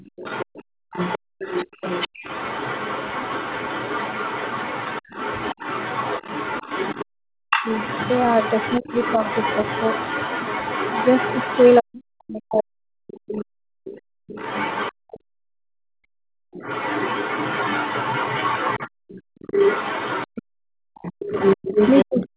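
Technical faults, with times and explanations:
Throughout: other side's voice leaking through. A second, fainter voice sits under the main talker for the whole clip, roughly 10 dB down. The likely cause is the far end playing from the loudspeaker and reaching the microphone because the echo canceller did not fully remove it. This adds a voice rather than removing sound. The gating and double-talk faults below take level away, while this leak is an extra talker. It is band-limited like the main voice by the 4 kHz ceiling of the G.711 call path.
0.53–2.23 s, 13.99–16.53 s, 18.89–20.95 s: background gated by the echo canceller. While the loudspeaker was active, the canceller clamped the microphone hard, and the room tone falls away by up to about 40 dB before snapping back when it releases. The drops add up to under a second in the first span, about two seconds in the second and about a second in the third.
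7.07–8.87 s, 11.81–13.64 s, 21.23–22.37 s: speech suppressed in double talk. Here the main talker's own voice dips sharply, by up to around 40 dB, while the other side is speaking at the same moment. The affected parts total about half a second in the first span and about a second and a half in the second, and the last span runs to the end of the clip. The likely cause is the canceller failing to tell the near talker from the loudspeaker echo and attenuating both. Unlike the background gating, the lost material is speech, not room tone.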